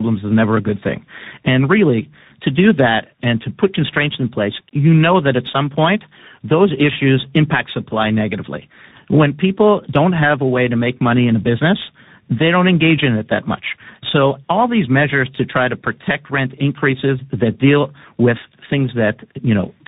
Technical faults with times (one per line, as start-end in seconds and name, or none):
0.00-19.87 tandem speech coding